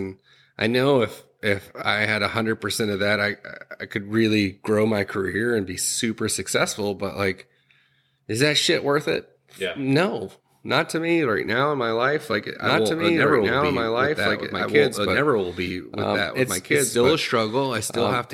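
A second, out-of-step copy of the signal, likely from a slower capture path or an edit holding two copies, gets mixed in from 12.63 s to the end of this speech clip, producing a doubled audio track: an unreverberant repeat, roughly as loud as the original, trailing about two seconds behind and starting abruptly.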